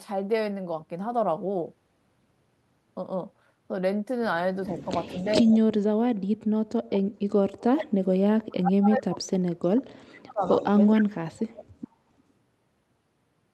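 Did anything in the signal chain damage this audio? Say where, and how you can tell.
Yes, in the call processing. There's an echo leak: faint delayed copies at 4.69–4.87, 5.06–5.36, 10.42–10.71, 10.87–11.01 and 11.8 s, trailing 424 ms and about 15 to 25 dB under the speech. The likely cause is a far-end canceller letting loudspeaker pickup slip back.

Same stage, speech suppressed in double talk. Across 5.4–8.15, 8.47–10.41 and 10.97–11.72 s the speech is pushed down, sometimes by about 40 dB. This is likely the canceller confusing the talker with echo while both sides spoke and ducking everything.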